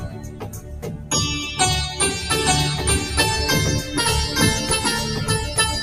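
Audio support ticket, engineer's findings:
Noise suppressor applied to music or sounds: level pumps and flutters through the whole clip, with swings of about 10 dB. Speech-tuned noise reduction is left active and treats steady tones and tails as noise, letting attacks pass and pulling held material down. Waveform: envelope breathing between onsets. Spectrogram: sustained partials and decays fading in patches, with transients intact.

Sound cut by the noise suppressor: 0.0 to 1.11 s, the opening sound sinks by up to about 9 dB for roughly a second. The same suppressor misreads this material as noise and gates it harder than the rest. Waveform: opening amplitude visibly squashed, recovering after 1.11 s. Spectrogram: dimmed, thinned energy across the start, with sustained components and tails weakest.

Doubled audio track: from 2.38 s to the end, a second full-band copy plays about a second behind the original at much the same level. 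It enters abruptly, with no room tail or decay. The likely cause is a second, slower capture path mixed in, or an edit holding two offset copies. Spectrogram: every event repeated at a fixed one-second offset. Waveform: hard onset of overlapping, denser material at 2.38 s.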